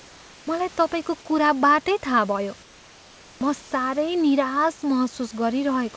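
From 0 to 0.47 s, before "मलाई तपाईँको कुराबाटै थाहा", the room background gives way to a steady, featureless hiss. This is comfort noise in place of the background. The sender likely stopped transmitting in the pause, and the receiver filled it with synthetic noise. It sits about 2 dB lower. After "तपाईँको कुराबाटै थाहा भयो", the same swap runs from 2.63 to 3.41 s, about 4 dB quieter. At 3.39 s the onset is clipped by the voice detector. Its late reaction likely dropped the first 20 ms, so the sound starts abruptly, with no soft attack. A brief comfort-noise patch follows from 3.62 to 3.71 s, about 2 dB down. Throughout, the call path's codec leaves nothing above 8 kHz.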